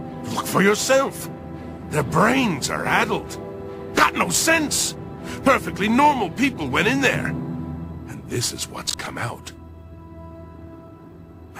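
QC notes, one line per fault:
8.86–9.07 s, processor overload crackle: a short burst of gritty tearing as several buffers of roughly 10 ms each miss their deadline and repeat old audio, unlike a single dropout click.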